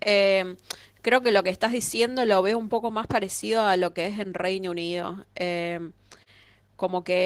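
No technical faults are audible.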